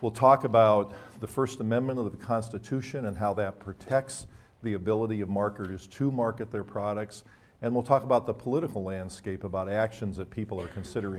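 The signal holds steady throughout, with nothing in the audio path that departs from normal behaviour at any point.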